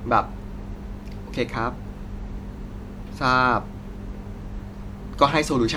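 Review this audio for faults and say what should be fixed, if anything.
No faults can be heard, so nothing needs fixing.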